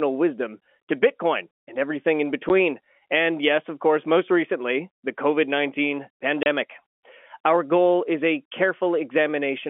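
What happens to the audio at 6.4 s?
At 6.43 s the speech drops out for 30 ms, until 6.46 s: packet loss filled with silence. The lost packets were replaced by silence, leaving a hard-edged hole.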